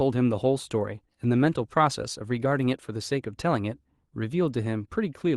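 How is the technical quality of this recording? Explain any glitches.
No glitches or faults are audible.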